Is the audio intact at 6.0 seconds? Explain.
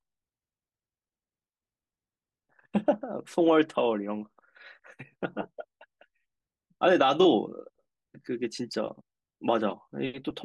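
Yes, at 6.0 seconds the speech carries on cleanly with no dropout, click, distortion or other fault to be heard.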